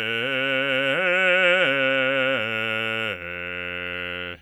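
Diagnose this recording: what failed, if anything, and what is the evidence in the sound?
Nothing failed in this music recording, and no stage of the chain leaves a trace in the sound. It carries no audible dropouts, distortion, noise or timing disturbance at any point.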